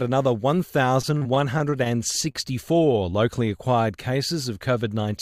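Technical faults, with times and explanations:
1.01 to 1.88 s, repeated packet loss (robotic sound): Packets kept failing to arrive in time across this stretch, leaving seven short holes, the longest about 33 ms. The receiver covered each one by extending the sound just before it, filling about 135 ms in all, roughly a sixth of the span, while about 60 ms of real audio was never heard. Because the patches come in quick succession, the sound turns choppy, with fragments dropping out.
2.32 to 2.36 s, short concealed packet loss: One brief burst of audio, about 20 ms, failed to reach the decoder in time. The receiver bridged the hole by carrying the preceding sound forward, synthesising about 26 ms before blending back into the real signal. The result is a momentary smear or wobble at that point.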